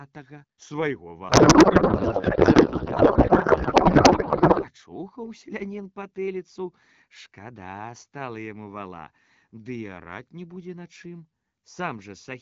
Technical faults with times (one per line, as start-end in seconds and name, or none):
1.29-4.67 codec payload misread